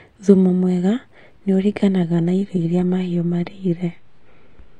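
Speech, in which an adaptive stream dropped to a lower bitrate at 2.12 s as the connection slowed, staying there to the end. With no gap, codec artefacts suddenly rise, which fits a switch from 96 kbit/s AAC to 20 kbit/s HE-AAC.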